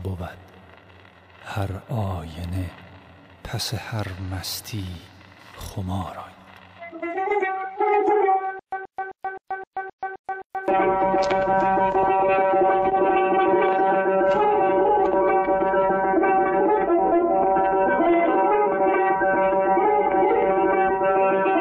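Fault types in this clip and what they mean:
compressed frames skipped: Decoder dropped compressed frames, jumping ahead roughly 150 ms at 6.31 s and 14.34 s, with 42.7 ms frames.
stutter with silent gaps: From 8.59 to 10.68 s, a 131 ms burst repeats eight times with 130 ms digital silence between, likely a stalled stream replaying its last fragment.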